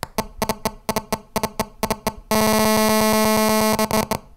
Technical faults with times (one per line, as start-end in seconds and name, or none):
0.00-4.36 hard clipping